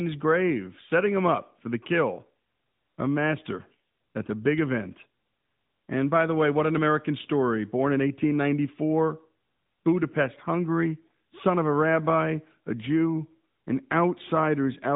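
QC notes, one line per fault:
Throughout: AMR narrowband mobile codec. The speech stops at 3.8 kHz and sits in a 150 Hz to 3.7 kHz band. Unlike plain telephone filtering, it also sounds buzzy and synthetic, rebuilt from sparse pulses, which fits a mode near 10.2 kbps.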